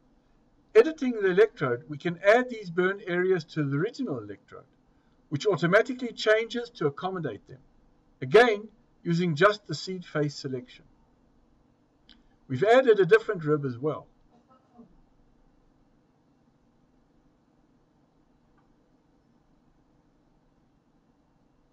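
No technical faults are audible.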